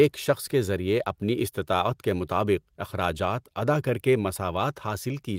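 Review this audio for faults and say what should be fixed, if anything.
Nothing needs fixing: the speech signal shows no technical faults at any point in the recording.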